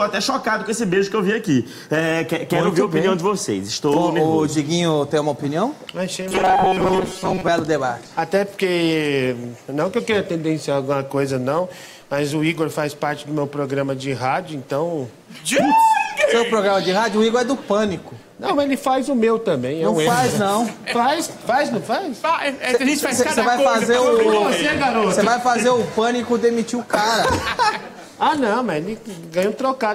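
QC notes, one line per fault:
6.21–7.49 s: robotic sound from repeated short buffers. A rigid metallic buzz at 188 Hz replaces most of the sound, likely from audio arriving too slowly and a 5.3 ms segment being looped. The spectrogram shows harmonics stacked every 188 Hz, and the waveform shows identical repeating cycles.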